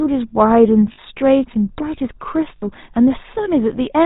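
Throughout, the speech carries the buzzy, gravelly roughness of the GSM full-rate codec, which fits 13 kbps. It excites a vocal-tract model with sparse pulses and cuts everything above 4 kHz. At 0.92–0.99 s and again at 2.56–2.71 s, lost GSM frames leave about 60 ms of held, metallic ringing. This fits three 20 ms frames being replaced by repeats of the last good frame.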